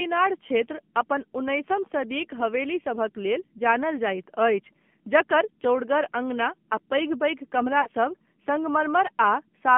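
The whole clip runs through an AMR narrowband mobile codec. Nothing passes below 150 Hz or above 3.4 kHz, and the speech sounds buzzy and synthetic, which fits a low mode around 7.4 kbps. From 7.82 to 7.89 s there are lost AMR speech frames. The decoder stretches the last good frame for about 40 ms, which fits two dropped 20 ms frames, so you hear a brief warbly smear and dip.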